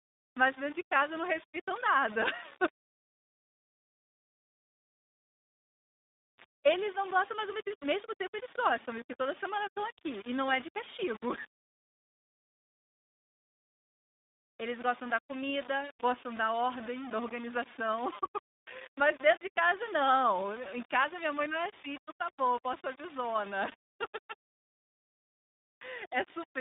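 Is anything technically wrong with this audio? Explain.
Yes, two problems run through the whole clip. There's a grainy distortion that tracks the speech, with quiet stretches sputtering, likely from low bit depth without dither: rounding to about 5 bits leaves error only roughly 20 dB down. On top of that, the iLBC codec narrows everything to about 200 Hz–3.7 kHz and codes each 20 ms frame independently. That gives a rough, synthetic, telephone-like quality consistent with its 15.2 kbps mode.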